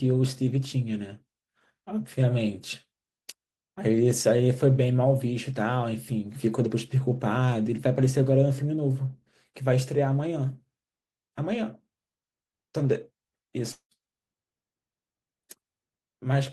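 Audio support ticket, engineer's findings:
Long network dropout, 13.71–13.94 s: speech smears into fading buzz, then 90 ms silence; 200 ms lost. Spectrogram shows a blurred, decaying band, then an empty gap. Likely receiver concealment after lost packets.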